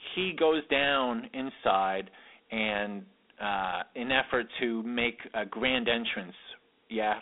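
From start to finish the speech carries Dialogic VOX ADPCM coding damage. The 4-bit adaptive quantiser leaves a plainly audible gritty hiss riding on the voice, and the line band runs from about 250 Hz to 3.6 kHz, with nothing above 3.9 kHz, which fits an 8,000-sample, 32 kbps stream.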